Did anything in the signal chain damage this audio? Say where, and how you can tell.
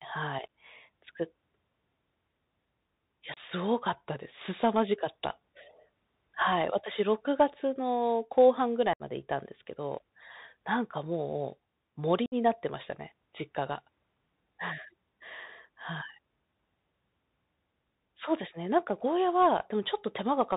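Yes. The codec stage damaged the whole clip: a Bluetooth CVSD headset codec, fitting a 64 kbit/s one-bit stream. CVSD tracks the waveform one up-or-down step per sample with an adaptive step size, so loud high content outruns it. On a spectrogram, energy stops at a hard 4 kHz ceiling, with granular hiss under the speech and scratchy s sounds.

The radio link between headset and phone dropped packets, and nothing concealed the gaps. This unconcealed Bluetooth headset packet loss blanks about 30 ms at 3.34 s, 67.5 ms at 8.93 s and 60 ms at 12.26 s. Silence or an idle pattern filled each gap. The waveform shows abrupt-edged holes that can click, and the spectrogram shows vertical blank strips. Afterwards the speech comes back briefly quieter as the CVSD step size rebuilds.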